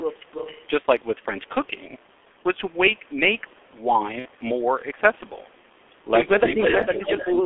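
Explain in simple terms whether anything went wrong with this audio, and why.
Yes, several things went wrong.

The whole speech clip passed through the G.723.1 codec, an old low-quality internet-phone format. It keeps only a narrow band, roughly 250 Hz to 3.5 kHz. So the voice sounds muffled and rough throughout, and consonants are smeared.

From 4.19 to 4.28 s there is VoIP packet loss concealed by the speech codec. About 60 ms of sound never arrived. The decoder filled the hole by stretching what came just before, so the sound turns briefly weak.

Near the end, the voice seems to hit speech suppressed in double talk. It dips from 6.4 to 6.64 s, and again from 7.3 s to the end. The likely cause is both people talking at once, so the call's echo control turned the voice down.

From 6.44 to 7.35 s a delayed copy of the voice can be heard, about a quarter second late. This is an echo leak. 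Some of the voice likely came back from the other side's loudspeaker and got past its echo canceller.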